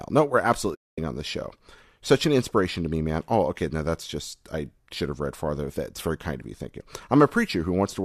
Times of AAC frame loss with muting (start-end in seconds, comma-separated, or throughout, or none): 0.75-0.98